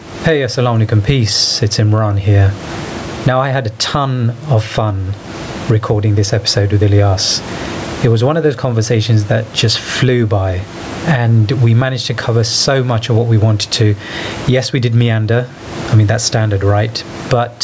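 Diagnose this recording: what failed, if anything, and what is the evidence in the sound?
The level pumps for the whole clip, a swing of around 20 dB. The speech sounds squashed, with loud and soft passages pulled close together in level. This is gain pumping, likely caused by input gain set far too high for the microphone, with a fast limiter or compressor clamping down on every peak. The room noise itself, about 32 dB below the speech, is ordinary background.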